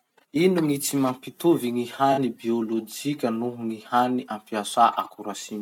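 At 2.12 s to 2.19 s a corrupt frame concealed by the AAC decoder covers about 66 ms of the speech, which fits two damaged frames being muted or smeared.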